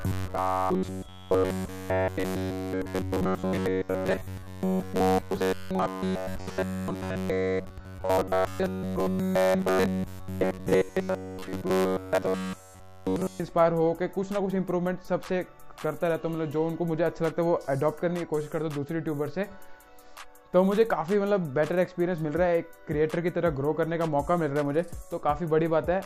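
From 0.01 s to 13.4 s the audio turns into a rigid, metallic buzz locked at about 93.8 Hz, still tracing the rough shape of the underlying sound. This is robotic sound from repeated short buffers, likely caused by playback repeating a tiny slice of audio, around 10.7 ms, whenever fresh data arrived too slowly, with the whole stretch affected. Unlike a steady mains hum, the buzz rises and falls with the sound itself.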